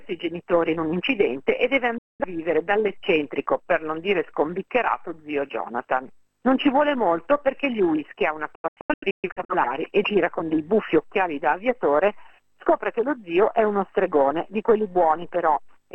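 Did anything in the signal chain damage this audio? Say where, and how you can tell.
Yes. The damage happened at reception, as a digital broadcast dropout. From 1.98 to 2.25 s the sound mutes with a 3 ms fade, then returns. From 8.55 to 9.55 s it breaks into several short holes. About 0.55 s goes missing, and the longest gap is 128 ms. The receiver lost frames or rejected them on checksum, so it muted until good frames arrived. The gap lengths fit frames of roughly 43 ms. The missing audio is gone.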